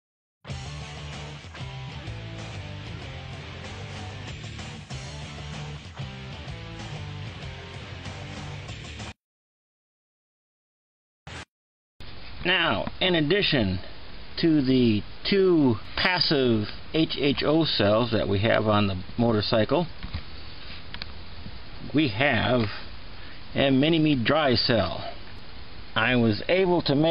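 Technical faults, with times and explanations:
No technical faults can be heard anywhere in this clip. Nothing in the audio calls for a time or an explanation.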